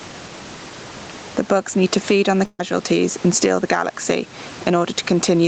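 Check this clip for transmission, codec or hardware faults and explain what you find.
Two faults can be heard in this speech: gain pumping throughout, and a burst of packet loss shortly before the halfway point.

Gain pumping runs through the whole clip. The level seems to breathe, with a swing of roughly 10 dB. Quiet and loud passages sit unnaturally close together, giving a squeezed, flattened quality. The likely cause is input gain set far too high, with a fast limiter or compressor clamping down on each peak and releasing in the gaps.

The burst of packet loss runs from about 2.45 to 2.61 s, right after "to feed on the". The last sound is stretched into a held, fading sound for about 134 ms, followed by roughly 40 ms of near silence. Speech then resumes further along, with about 140 ms missing. Several packets in a row were lost or arrived too late. The receiver padded the gap by extending and fading what it had, then skipped ahead when data returned.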